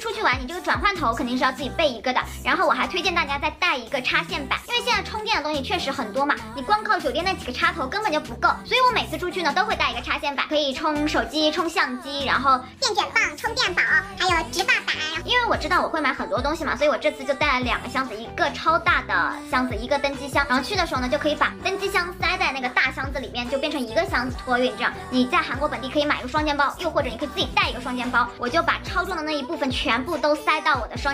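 No technical faults can be heard anywhere in the clip. The audio gives no sign of trouble in the chain that captured or delivered it.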